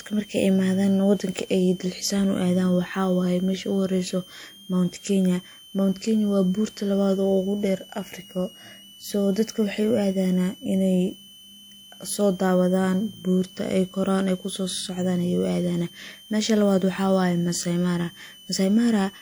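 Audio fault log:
throughout: switching supply whistle. A high tone sits under the speech for the whole clip, moving between about 2.89 and 3.21 kHz around a centre near 3 kHz, at roughly 25 dB below the speech. A switching power supply running at an audible rate leaks its switching frequency into the audio path. On a spectrogram this shows as a thin horizontal line near 3 kHz, present even in pauses. At that level it barely alters the waveform.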